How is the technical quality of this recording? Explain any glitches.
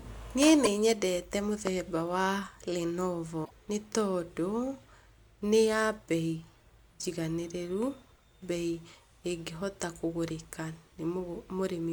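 The recording has two brief glitches, both caused by damaged data in a compressed stream. The first runs from 0.64 to 0.67 s. The second runs from 3.41 to 3.51 s, just before "nĩ tondũ". In each, corrupted bytes made the decoder misread frames, lose sync and skip ahead to the next valid header. The result is a short glitch in the speech. A plain dropout would instead leave a clean gap of silence, with no tonal chirp or skipped material.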